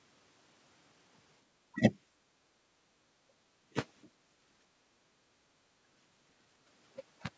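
At 1.72 to 1.81 s the speech dips sharply for about a tenth of a second, falling by roughly 20 dB before recovering. This is speech suppressed in double talk, and the likely cause is the echo canceller mistaking near-end speech for loudspeaker echo while both sides were active, so it attenuated the talker along with the echo. The same brief, hard dips recur at 3.28 to 3.33 s and 5.62 to 5.67 s. Each lasts only a few tens of milliseconds, with the last one reaching around 25 dB down, and each sounds like a short bite taken out of the speech.

Between these, the room tone is pulled down as background gated by the echo canceller. While far-end audio plays, the canceller clamps the microphone and the ambience sinks, then returns when it releases. The dips fall at 2.14 to 2.23 s (about 7 dB), 2.6 to 2.8 s (about 16 dB), 4.15 to 4.31 s (about 5 dB) and 4.66 to 5.29 s (about 10 dB). The longest is the last one, which holds the background low for around half a second.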